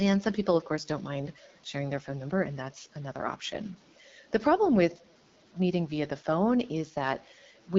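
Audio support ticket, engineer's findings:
Distortion on all speech, pauses filled with hiss, throughout. Likely a stuck bit in the converter or data line, offsetting about half of all samples.

AMR wideband (HD Voice) codec artefacts throughout: rough, raspy speech, band-limited near 7 kHz. Fits a low-rate mode such as 8.85 kbit/s.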